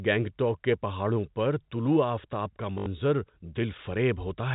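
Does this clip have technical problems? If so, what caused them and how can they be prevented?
Yes. Packet loss with last packet repeated occurs from 2.78 to 2.86 s, just after "پر طلوع آفتاب کا". About 80 ms of audio went missing, which fits four lost 20 ms packets. The receiver replayed the last packet to fill the gap, and the run forms a short robotic stutter buzzing near 50 Hz. This sits over the narrowband G.711 telephone sound. Proper packet loss concealment, which interpolates the missing audio instead of repeating packets, together with an adequate jitter buffer, would prevent it.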